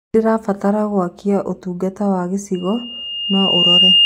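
At 2.54 s a loudspeaker feedback squeal begins and runs to the end of the speech clip. A single tone near 2.8 kHz appears and swells over about a second. It ends up roughly 10 dB louder than the speech. The microphone is hearing the loudspeaker it drives. At that one frequency the loop gain has passed unity, so the tone keeps feeding itself. Nothing breaks the loop before the audio stops.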